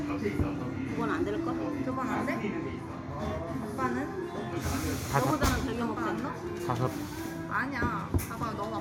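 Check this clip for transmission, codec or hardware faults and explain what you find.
No transmission, codec or hardware faults can be heard anywhere in the recording.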